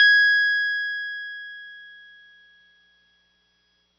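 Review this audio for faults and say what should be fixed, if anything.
Likely AAC compression at a low bitrate, one that fits around 24 kbps, runs throughout the music. The encoder discards everything above 6 kHz, so the whole clip sounds dull and muffled, with plainly audible codec damage. Encoding at a higher bitrate would prevent it.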